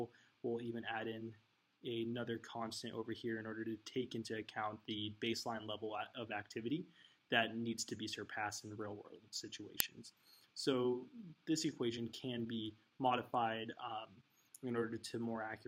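At 9.80 s a brief, loud crack cuts in, an uninitialised buffer: a block was sent to playback before any audio was written into it, so leftover memory was heard as samples. It lasts about 1.33 ms, which fits a 64-sample buffer. Unlike a dropout's silence or a simple click, it is raw garbage.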